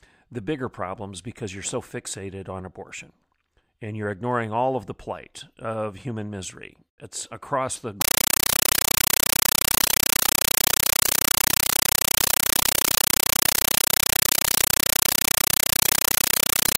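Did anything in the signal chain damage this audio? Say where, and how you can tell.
Yes. From 8.01 s, just after "across the", to the end of the clip at 16.78 s, the speech is replaced by loud, chattering static. This is a compressed stream played as audio at the playback link: an AC-3 bitstream sent over S/PDIF or HDMI was treated as PCM instead of being decoded. Each frame comes out as an 8 ms noise burst followed by zero padding, repeating at 31.25 Hz. This is the signature of an undecoded Dolby Digital stream, and the data rate fits a 384 kbps encode.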